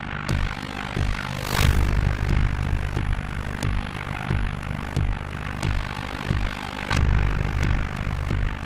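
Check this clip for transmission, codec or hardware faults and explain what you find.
One fault runs through the whole clip: overlap-add ripple. The audio was split into windowed frames and rejoined with an overlap whose windows don't sum to a constant gain, so the level dips once per frame, at around 50 Hz, which points to a frame hop near 20 ms. The dips reach about 60 dB deep, giving a harsh, buzzy, robotic tremolo. A waveform shows a comb-like envelope of regularly spaced notches, and a spectrogram shows thin vertical gaps repeating evenly across the clip.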